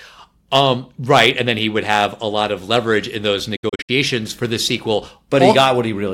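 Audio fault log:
3.56–3.90 s, digital broadcast dropout: the speech breaks into several short silent holes rather than one gap, totalling 192 ms of missing audio spread over about 320 ms, with the longest single hole 64 ms. Each cut fades out in about 8 ms, so the edges are soft rather than clicking. The pattern points to roughly six frames failing reception or checksum, with the receiver muting each bad frame until valid data resumed. Content from those frames is simply absent.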